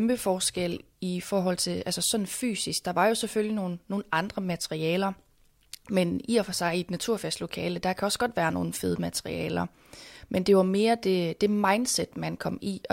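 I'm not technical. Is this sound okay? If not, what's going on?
Yes, the recording is technically sound, with nothing in the signal itself going wrong at any point.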